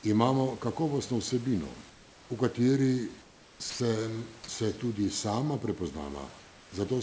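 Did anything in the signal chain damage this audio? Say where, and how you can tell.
Yes. Comfort noise in place of the background appears at 1.90 to 2.30 s, 3.22 to 3.60 s and 6.40 to 6.72 s. The room noise, sitting about 26 to 28 dB below the loud speech, turns flat and textureless and drops about 2 to 3 dB. This is likely discontinuous transmission in the call path, with the receiver synthesising noise during pauses. A noise gate would leave silence instead.

Sound dropped by the voice detector occurs at 3.70 to 3.80 s. About 100 ms of speech gives way to the same steady synthetic noise and then resumes. The likely cause is the sender's voice detector misjudging the speech as background. Packet loss would instead leave a gap, a click or a smeared concealment artefact, not clean comfort noise.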